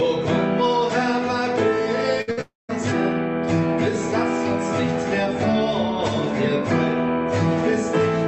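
At 2.21 to 2.29 s and again at 2.31 to 2.39 s, a burst of packet loss leaves roughly 60 ms each time filled by a fading copy of the preceding sound. On a spectrogram this shows as smeared, repeated harmonics, and the waveform envelope decays before the audio jumps ahead.

From 2.41 to 2.71 s the sound stretches into a decaying buzz or hiss and then falls quiet for about 180 ms, likely a long network dropout. The waveform thins to a flat line, and the spectrogram goes dark across the 8 kHz band the call codec passes.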